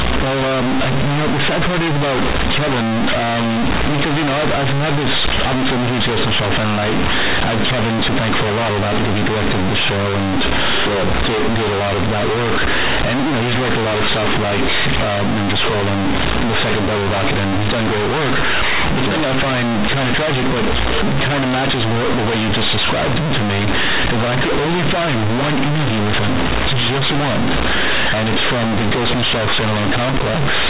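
From start to finish, the speech is damaged by companded audio read as linear. The mu-law bytes are played as plain 8-bit samples without expansion. Quiet passages become as loud as peaks. The result is harsh, buzzy distortion, with loud noise filling every pause.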